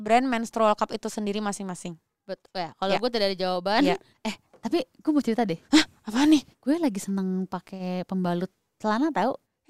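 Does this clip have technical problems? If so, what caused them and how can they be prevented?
No, there are no technical problems in this clip.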